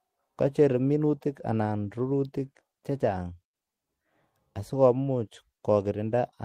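A speech recording, and nothing is technically wrong with it.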